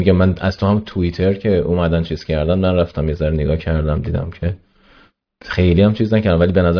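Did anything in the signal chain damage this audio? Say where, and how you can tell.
No, nothing in the signal chain damaged this audio.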